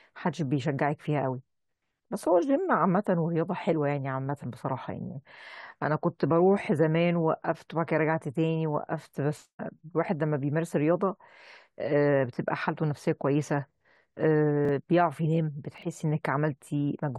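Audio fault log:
9.59 s, stream segment skipped: the speech jumps abruptly forward, with a small blip at the join where two unrelated stretches of sound meet. The discontinuity is what produces the blip. The cause is likely a segment of the stream that failed to load, with the player moving straight on to the next one, so that a portion of the programme is simply absent rather than delayed.
14.65 to 14.69 s and 15.78 to 15.82 s, chunks out of order: two brief jumbled moments. In each, one short block of audio plays late, after blocks that should follow it. It lands two blocks late in the first case and three in the second. The blocks are about 11.6 ms long. No audio is lost, but each misplaced block creates three hard joins.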